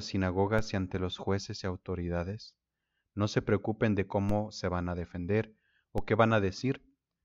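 Three DC steps occur at 0.59 s, 4.29 s and 5.98 s, each a sudden jump in the waveform's zero line of about -23 dBFS that then bleeds away through a 5 Hz high-pass. The first comes just before "y ante los jueces", the second between "no se preocupen de" and "se van a defender", the third right after "se van a defender". Each lands as a short low thump under the speech.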